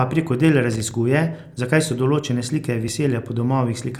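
Speech, with two kinds of technical fault. First, a loose connector crackle from 0.73 to 0.80 s: a worn or dirty contact kept making and breaking as it shifted, chopping the signal and popping any DC on the line, so about 80 ms of irregular scratchy crackle rides over the speech. Second, overlap between stream segments at 0.91 to 0.93 s and 2.88 to 2.91 s: neighbouring segments claimed overlapping time stamps, which fits segments about one second long, and the player trimmed 20 to 25 ms of real audio each time, so the waveform jumps and a small click or skip is heard.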